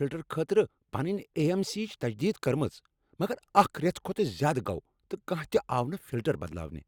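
A corrupt frame decoded at 1.39 to 1.41 s interrupts the speech with a brief blip lasting about 20 ms, which fits a single damaged compressed frame. Flipped bits inside that frame led the decoder to misread its gains and spectral codes, yet it played the frame anyway, so energy landed at the wrong frequencies for the frame's duration. The result is a short chirp-like burst that stays fairly quiet, peaking at roughly -35 dBFS.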